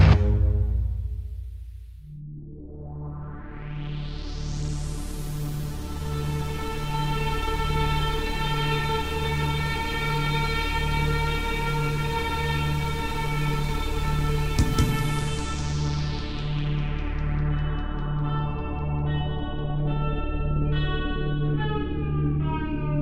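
From 4.46 to 6.55 s a call bitrate drop, fitting roughly 25 kbps, turns audio rough and muffled; the spectrogram goes empty above 12 kHz.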